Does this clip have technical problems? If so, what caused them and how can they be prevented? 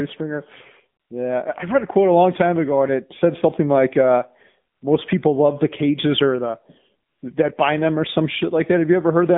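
Yes. Throughout the recording, the speech carries the sound of an AMR narrowband mobile codec at a low mode, which fits roughly 7.4 kbps. The band runs from about 150 Hz to 3.6 kHz, with nothing above that, and the voice has the plainly audible buzzy, synthetic quality of a vocal-tract model excited by too few pulses per subframe. To prevent this, route the call over a wideband codec such as AMR-WB or EVS, or use a higher AMR mode.

AMR comfort noise appears three times: 1.00–1.10 s, 4.74–4.82 s just after "said something like uh", and 7.10–7.22 s between "the cages or the" and "that bind them or". Each time, the sender's voice activity detector judged the talker silent and stopped sending speech frames for 80 to 120 ms. The receiver substituted smooth synthetic noise that cuts in and out against the real background. To prevent it, disable discontinuous transmission or make the voice activity detector less aggressive.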